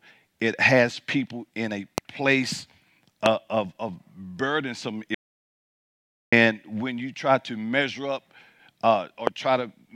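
A loud pop lands at 1.98 s, after "has people in a", and again at 3.26 s, after "people in a place", each a single sharp click about 20 dB above the speech, likely from a voltage transient such as a switch, static or driver glitch. From 5.15 to 6.32 s, after "of of burdensome", an audio dropout to silence removes about 1.18 s, leaving dead silence with no room tone until "when you try to", likely a lost input link. A third loud pop occurs at 9.27 s.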